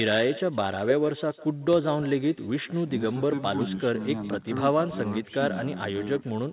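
A speech recording carrying an echo with no canceller from start to finish. Each phrase returns roughly 150 ms later, about 19 dB quieter and thin. A far-end loudspeaker is feeding a microphone, and nothing removes the returning copy. The sound stops at 4 kHz, which points to a narrowband telephone codec on the call path.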